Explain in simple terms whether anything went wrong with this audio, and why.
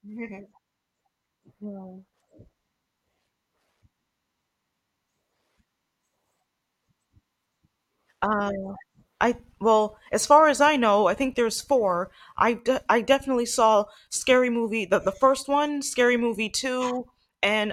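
Nothing went wrong here; the speech sounds as intended.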